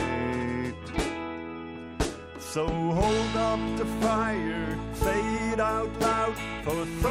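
A short, sharp tick at 6.03 s cuts through the audio, broadband and unrelated to anything around it, peaking at about -12 dBFS. It is a bit error spike: one flipped bit pushed a single sample to a wrong value, which snapped straight back on the next sample.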